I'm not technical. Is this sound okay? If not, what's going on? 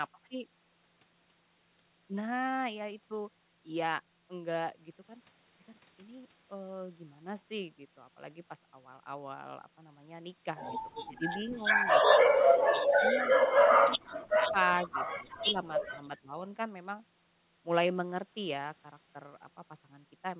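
No. The problem is most likely speech suppressed in double talk: both ends of the call spoke at once, and the echo canceller, unable to tell the voice apart from the returning loudspeaker sound, turned the voice down. You hear the voice dip or briefly cut out at 10.99–11.22, 12.75–13.36, 13.7–14.58, 14.83–14.95, 15.19–15.56 and 16.22–16.42 seconds. The deepest gaps are around 12.8 and 14 seconds.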